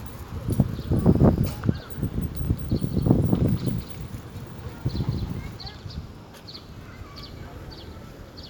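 A recording of sounds carries a doubled audio track from 2.45 s to 5.57 s: a full-band copy trails the original by about a fifth of a second, roughly 5 dB quieter, with no decay or room colour, and it switches on and off abruptly. On a waveform, each transient gains a smaller twin shortly after it. A spectrogram shows every event repeated as a fainter, time-shifted duplicate across all frequencies. The likely cause is the sound being captured a second time through a slower path.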